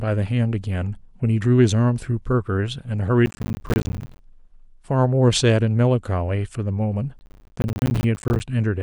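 From 3.26 to 4.19 s, and again from 7.19 to 8.4 s, the speech is shredded by processor overload crackle. The processor misses dozens of buffer deadlines in quick succession, each leaving a hard-edged silent gap of around 10 ms. The result is a dense, gritty tearing rather than a single clean dropout. Unlike clipping distortion, it does not follow loudness, and it stops abruptly once the load eases.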